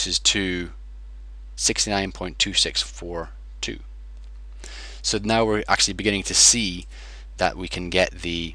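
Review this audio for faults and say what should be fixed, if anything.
Nothing here needs fixing, as the signal stays continuous and stable throughout with no audible technical faults.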